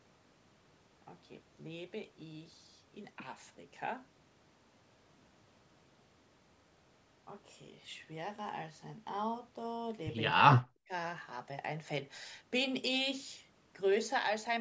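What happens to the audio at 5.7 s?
Nothing goes wrong at 5.7 s: the speech continues intact there, carried through ordinary call microphone processing with no dropout, click, distortion or other fault.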